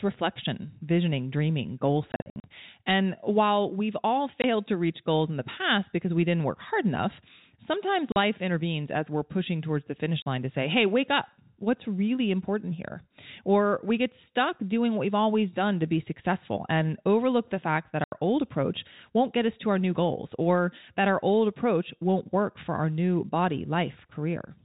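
Around 2.12 to 2.44 s, just after "reflection visioning dreaming goal", packet loss filled with silence chops the speech into stutters. Shorter holes follow at 4.42, 8.12, 10.22 and 18.04 s. Missing packets became dead silence in steps fitting 20 ms packets, with hard edges at each gap.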